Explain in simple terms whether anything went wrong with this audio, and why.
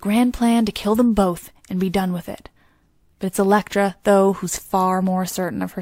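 Corrupt frame decoded, at 3.09 s just after "be done with it" and at 4.54 s just after "though who's". Each time, one damaged chunk of compressed audio was played anyway, misplacing sound for about 0.05 s. The first glitch is much weaker than the second.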